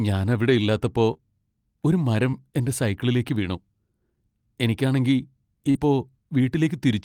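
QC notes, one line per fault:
1.13–1.20, 2.30–2.35, 5.71–5.77 s, short concealed packet loss: The first three gaps each lost about 20 ms of audio. At 1.13 s two losses run back to back, the second coming just after "ഞാൻ അവിടെ ഇല്ലാത്തപ്പോ". At 2.30 s a loss falls between "ഒരു മരം" and "എന്റെ സൈക്കിളിലേക്ക് വീണു". At 5.71 s about 40 ms is missing. The receiver stretched the preceding sound to fill each hole, so you hear a brief smear or wobble. On the waveform, near-identical pitch periods repeat before blending back. On the spectrogram, harmonics flatten into steady bands.
2.33–2.35 and 5.75–5.85 s, lost packet rebuilt from error correction: Here the missing audio came back from a low-bitrate copy carried in the following packet, so there is no gap. About 20 ms was rebuilt at 2.33 s, just before "എന്റെ സൈക്കിളിലേക്ക് വീണു", and about 60 ms across the later stretch, which fits three 20 ms frames. 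These spots sound briefly rougher and hissier. On the spectrogram, noise fills in between the harmonics and their edges blur.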